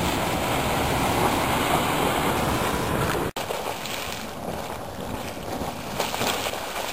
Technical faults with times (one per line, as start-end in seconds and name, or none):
0.00-6.92 Wi-Fi interference